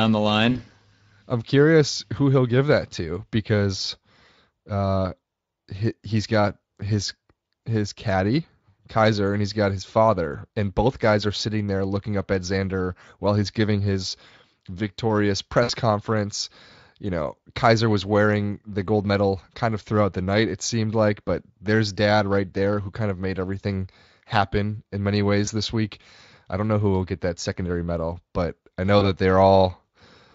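At 0.51 to 0.58 s, then 15.63 to 15.71 s just after "he's giving his victorious", 25.45 to 25.49 s between "everything happen in many" and "this week I don't", and 28.99 to 29.04 s after "medal but I know", there's VoIP packet loss concealed by the speech codec. The Speex decoder, running with light codec damage at a fairly generous rate, fills gaps of about 40, 60, 20 and 20 ms by stretching the last sound into a brief buzzy or noisy, fading smear, and the voice sounds weak or distorted for a moment afterwards.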